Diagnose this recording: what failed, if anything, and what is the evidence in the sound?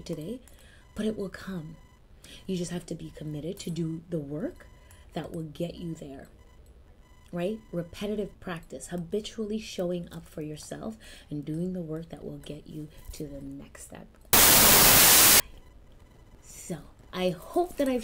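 Wrong sample width, at the sample-format conversion stage: from 14.33 to 15.40 s the sound turns into loud noise with the original buried underneath, running fast and sharp at 1.33 times speed. That fits packed 24-bit data read as 32-bit, so each value straddles mismatched bytes.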